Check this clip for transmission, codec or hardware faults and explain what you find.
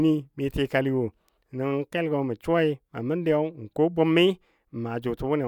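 No faults are audible anywhere in this speech recording.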